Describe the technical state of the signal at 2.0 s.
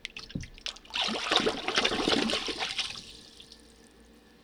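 At 2.0 s the signal is intact, with no dropout, distortion, glitch or other technical fault audible at that point.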